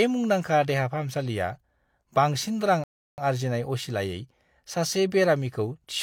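Speech that cuts abruptly to silence at 2.84 s and picks up again at 3.18 s, continuing exactly where it left off, so about 0.34 s is added and nothing is skipped. It is a rebuffering stall: playback ran out of downloaded audio and waited for more to arrive.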